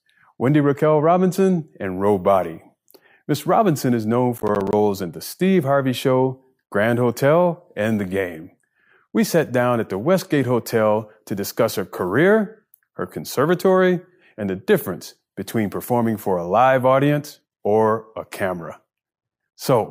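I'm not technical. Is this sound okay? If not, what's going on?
No. From 4.38 to 4.73 s the speech has processor overload crackle, a short gritty burst. The computer handling the audio works in tiny chunks, each roughly a hundredth of a second long, and here it fell behind and missed around ten of them in quick succession. Each missed chunk became a brief moment of silence with abrupt edges, and those rapid dropouts blur together into a crackly tearing sound that stops once the computer catches up.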